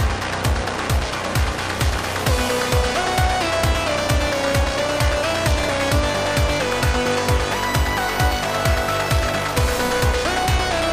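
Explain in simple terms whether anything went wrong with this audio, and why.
Nothing went wrong here.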